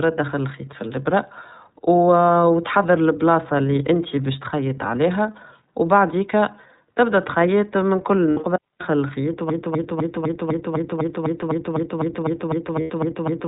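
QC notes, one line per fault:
Throughout: iLBC codec. Speech is band-limited to narrowband with nothing above 4 kHz, and the plainly audible coding damage gives it a rough, synthetic edge, which fits 30 ms frames at about 13.33 kbps. A spectrogram shows a hard ceiling at 4 kHz with empty space above.
8.31 to 8.41 s and 12.81 to 12.90 s: lost iLBC frames. Right after "تبدا تخيط من كل", 60 ms drops out, and later 90 ms does. In each gap the decoder repeats the last pitch cycle blended with noise, heard as a held buzzy or breathy vowel, and the speech recovers almost at once because each frame is decoded on its own. The waveform shows repeated periodic cycles in place of the lost material.
8.56 to 8.81 s: digital wireless dropout. The receiver lost too much data and muted for about 248 ms with a very short fade, leaving a clean hole of near silence with no noise burst on either side. The waveform collapses to a flat line, and the spectrogram shows an empty vertical band.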